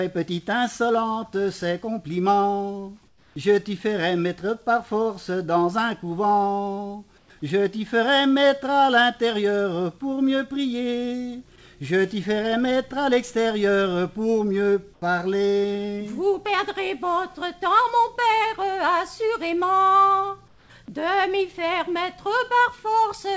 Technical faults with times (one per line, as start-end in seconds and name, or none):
3.08-3.36 comfort noise in place of the background
7.18-7.30 comfort noise in place of the background
14.94-15.02 comfort noise in place of the background
20.48-20.70 comfort noise in place of the background